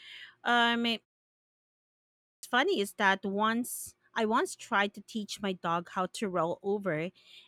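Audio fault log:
2.15–2.43 s, clipped start after a pause: Speech resumes abruptly after about 1.2 s of silence. Its first 0.28 s is missing, so the opening sounds are cut off. The output device went idle during the pause and needed that long to wake before playing again.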